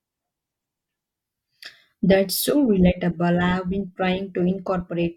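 No technical faults can be heard anywhere in the recording. The speech runs without interruption or audible disturbance from beginning to end.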